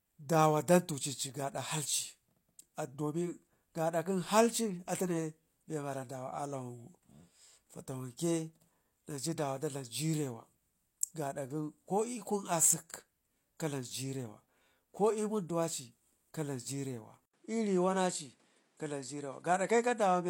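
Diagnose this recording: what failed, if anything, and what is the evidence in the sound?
Input switched to a poorer device at 17.26 s, likely in the driver: an 80 ms gap, then nothing above 11.4 kHz and new noise.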